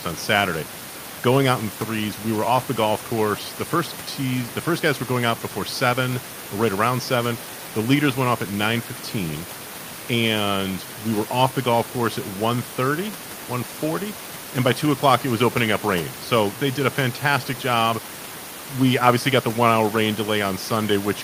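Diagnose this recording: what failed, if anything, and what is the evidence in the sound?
Nothing in this one points to a failure at any stage, and the only thing under the speech is some ordinary room noise sitting about 17 to 21 dB down, which is just the space the microphone was in.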